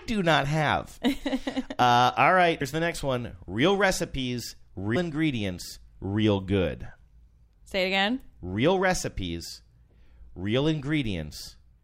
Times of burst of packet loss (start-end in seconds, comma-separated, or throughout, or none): none